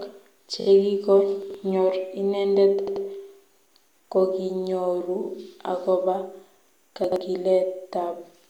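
Speech with two kinds of technical fault. The first is repeated frames, which occur three times. At 0.59 to 0.66 s a 21 ms slice plays three extra times, a rapid stutter that fits a single compressed frame being resent. At 2.86 to 3.04 s a 79 ms block plays twice more, adding 176 ms. At 5.24 to 5.28 s a 43 ms block plays once more. On a spectrogram these show as identical strips side by side, and the waveform has matching copies. The second fault is chunks out of order, at 1.42 to 1.54 s and again at 7.04 to 7.16 s. In each case a 40 ms chunk plays two chunks later than it should. Nothing is missing, but the sound jumbles briefly across the three hard joins. A spectrogram shows broken continuity, with harmonics and formants jumping and then resuming. The waveform shows abrupt discontinuities at each boundary.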